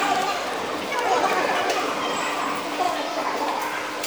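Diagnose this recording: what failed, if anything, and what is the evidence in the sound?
The wrong sample rate at the playback stage affects the sound throughout. Everything runs twice as fast and a full octave (12 semitones) higher, which fits material recorded near 22 kHz played at 44.1 kHz. Unlike a pitch shifter or time-stretch, speed and pitch move together.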